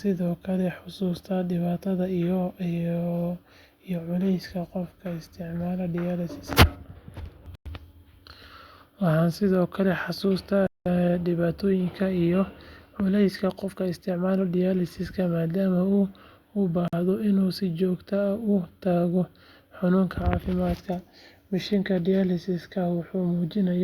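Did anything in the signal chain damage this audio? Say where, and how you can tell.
Yes. The speech cuts to dead silence three times: 7.55 to 7.66 s (105 ms), 10.67 to 10.86 s (192 ms), and 16.88 to 16.93 s (49 ms), just before "inuu si". Each time the sound resumes abruptly. A waveform shows each gap as a flat line, and a spectrogram shows a clean vertical blank across all frequencies. This is likely a Bluetooth stall at the wireless playback link: delayed packets emptied the headphones' buffer, pausing output until retransmissions arrived.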